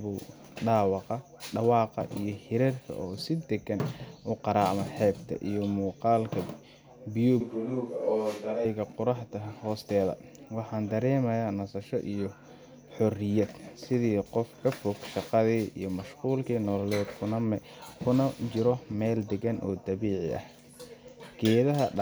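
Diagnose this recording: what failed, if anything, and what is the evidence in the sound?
A switch to a distant microphone runs from 7.41 to 8.65 s, at the capture stage. The speech turns suddenly roomy and hollow, loses its low end, drops by roughly 5 dB, and sits over more background noise, about 35 dB below the voice. It snaps back just as abruptly at 8.65 s. The likely cause is that the close microphone's feed dropped out briefly, leaving a farther pickup carrying the room along with the voice.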